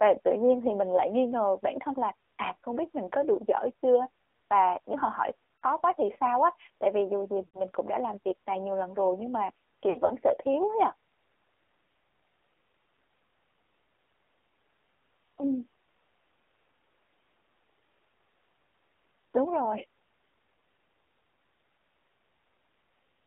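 The whole recording runs through an AMR narrowband mobile codec, and you can plainly hear it. The band sits roughly between 300 Hz and 3.5 kHz, so everything sounds boxed-in and phone-like. The speech has that buzzy, slightly synthetic edge you get when the vocal tract model is fed very few pulses per frame, which fits a low rate around 7.4 kbps.

There are lost AMR speech frames in three places. At 5.56 to 5.64 s, right after "và nếu họ hỏi" and before "quá thì sao á", about 60 ms goes missing, roughly three frames. The decoder smears the last good sound, and it dips and warbles briefly. At 7.46 to 7.61 s, between "vì dù gì" and "cũng đã làm việc", there's an 80 ms gap that sounds longer and more drawn out, fading toward silence before the voice comes back a bit rough. The third, from 9.90 to 10.12 s after "lần rồi nhưng mà" and before "sợ thiếu ấy ạ", is scattered losses totalling 100 ms over about 200 ms. 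The longest run is 60 ms, so you hear a stuttery, wobbly patch rather than one clean dropout.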